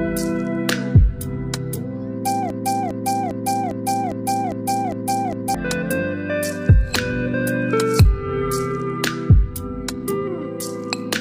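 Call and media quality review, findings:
Broken-record loop, 2.50–5.55 s: a 0.40 s fragment repeats exactly eight times back to back. Likely a stalled player, encoder or stream re-sending its last held buffer. The audio due in that window is lost.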